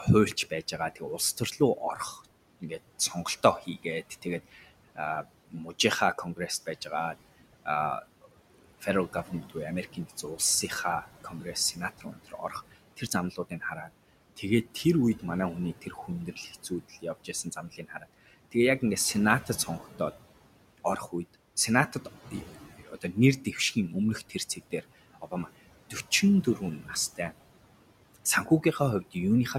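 Noise suppressor artifacts run through the whole clip. The suppressor treats the steady room noise, which sits about 17 dB below the speech, as something to remove, and pulls those bands down by about 18 dB frame by frame. The background drops away in the pauses and swells back under each phrase.

Speech cut by the noise suppressor occurs in five stretches. The first runs from 0.05 to 15.23 s, ending just before "манай хүний". Here about 2 s of speech in total is pulled down, at worst by about 18 dB. The second runs from 15.82 to 20.0 s, starting just after "манай хүний", with around a second affected and drops of up to about 14 dB. The remaining three fall at 21.89 to 23.76 s (about half a second, up to about 12 dB), 24.29 to 27.32 s (under a second, up to about 14 dB) and 28.14 to 29.55 s (a fifth of a second, up to about 14 dB). In each stretch the suppressor mistakes soft consonants and quiet word endings for noise and turns them down with the background, so they sound swallowed or faint.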